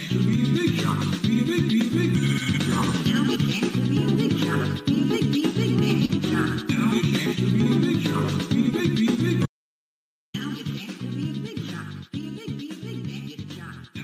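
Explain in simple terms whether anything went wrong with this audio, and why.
Short concealed packet loss, at about 6.05 to 6.11 s. Roughly 40 ms of audio never reached the player in time. To hide the hole, the receiver guessed: it stretched out the last bit of sound it had, then blended back into the real audio once it arrived. The result is a tiny smear or wobble lasting a fraction of a blink, and the original sound in that slice is replaced by the guess.

Audio dropout to silence, from 9.46 to 10.34 s. For close to nine-tenths of a second the sound cuts out completely. Even the background room sound disappears, leaving dead silence before the audio snaps back in mid-flow. That points to the input likely being lost for a moment, through a loose connection, a failed link or an accidental mute, while the recording kept running and stored nothing. Whatever happened in that gap is gone.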